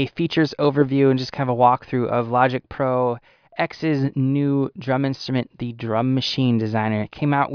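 No technical faults can be heard anywhere in the recording.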